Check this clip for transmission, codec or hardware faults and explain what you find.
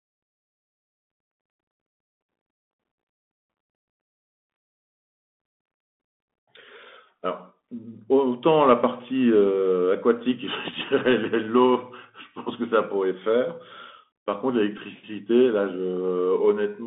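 Two faults are present: a codec limitation across the whole clip and one brief dropout near the end.

Bluetooth CVSD headset codec, throughout: the speech has passed through the narrowband headset link. The codec sends a single up-or-down bit per sample and adapts its step size, which fits a 64 kbps stream. The line carries only about 200 Hz to 3.6 kHz. The damage is plainly audible: the upper band is missing, s sounds are scratchy, a granular hiss sits beneath the speech, and loud high sounds distort wherever the waveform changes faster than the step can follow.

Bluetooth headset packet repeated, at 14.78 s: about 11 ms of audio was lost between headset and phone. The chip decoded the previous packet's bits again instead of leaving a gap, which fits three lost packets. Because each repeat recurs every 3.75 ms, the fill has a periodic, buzzy quality near 267 Hz. It lasts only a few cycles, so it comes through as a short rough blip before clean packets return.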